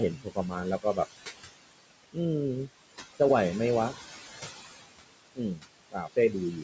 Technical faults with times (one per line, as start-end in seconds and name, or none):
0.00-6.63 noise suppressor artifacts
0.17-0.55 speech cut by the noise suppressor
5.35-5.62 speech cut by the noise suppressor
5.90-6.35 speech cut by the noise suppressor